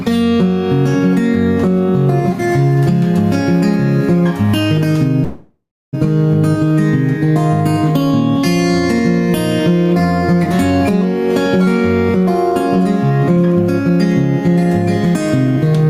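Gain pumping runs through the whole clip. The gain swings by around 5 dB, leaving loud and soft parts squashed together. The likely cause is input gain set far too high, with a fast limiter pulling it back down.

From 5.23 to 5.95 s there is a call audio freeze. The last sound is stretched into a fading buzz or hiss that ends in about 310 ms of silence. Then the audio resumes where it stopped, with nothing lost but a 695 ms gap inserted. The likely cause is delayed packets draining the jitter buffer.

Jitter buffer speed-up follows at 12.16 to 13.90 s, running at 108% and cutting roughly 150 ms, and again at 15.05 to 15.86 s, at 106% and cutting roughly 50 ms. Short pitch-period slices are removed to shrink the buffered delay, so the sound hurries along at unchanged pitch.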